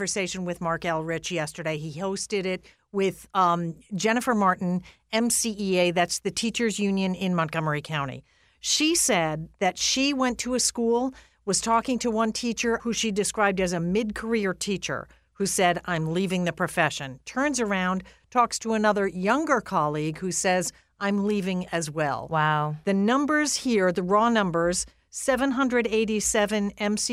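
Nothing technical stands out in this speech recording, so there's no fault to point to and no time worth flagging anywhere along it.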